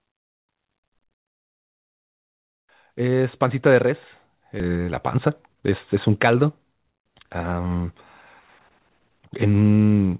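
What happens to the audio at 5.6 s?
At 5.6 s the receiver is in the middle of a jitter buffer speed-up, from 4.69 to 7.60 s. It is holding more buffered audio than it targets, so it repeatedly cuts slices about one pitch period long, dropping roughly 0.3 s overall. The speech runs at 111% speed at unchanged pitch and sounds hurried.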